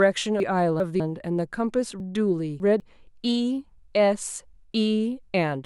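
Between 0.4 and 1.0 s the speech jumbles briefly, and it happens again from 2.0 to 2.8 s. Both are chunks out of order: a 200 ms piece of audio plays two chunks late in the first case and three chunks late in the second. Nothing is missing, but the sound comes back in the wrong sequence, and each displacement leaves three hard joins.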